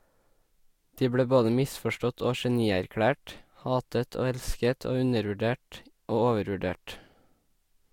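No technical faults are audible.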